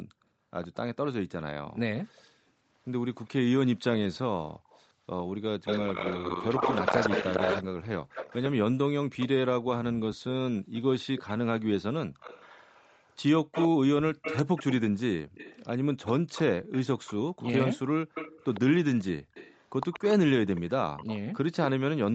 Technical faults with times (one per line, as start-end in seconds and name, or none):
0.62-1.06 echo leak
4.65-21.18 echo leak
5.88-8.61 call bitrate drop